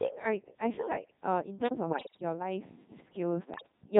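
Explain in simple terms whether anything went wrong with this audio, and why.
Yes, two things went wrong. The whole clip of speech has passed through the Codec 2 vocoder, a very low-rate digital radio voice system. Instead of keeping the actual sound wave, it sends only a rough description of the voice: its pitch, loudness, whether it is buzzing or hissing, and its general tone colour. The receiver then rebuilds the voice from simple tones. That is why the speech sounds heavily robotic and buzzy from start to finish, rather than muffled or watery as ordinary low-quality compression would sound.

On top of that, there are bit errors on digital voice radio, from about 1.90 to 2.22 seconds and again from about 3.54 to 3.72 seconds. In those moments a noticeable share of the received data was corrupted, as happens at the edge of radio coverage. Each piece of data controls the pitch, level or tone of a whole slice of voice, so the voice suddenly lurches in pitch and loudness and breaks into warbles and robotic gibberish. 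A simple dropout would go silent instead, but here the sound keeps playing and is wrong.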